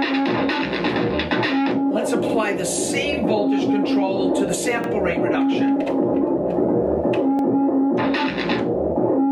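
You've got a case of overlapping chunks here: at 2.29, 4.84 and 7.39 s a 50 ms slice of sound plays twice, so you hear a small stutter or click at each join. The audio was handled in 2.5 s chunks that each start slightly before the previous one finished.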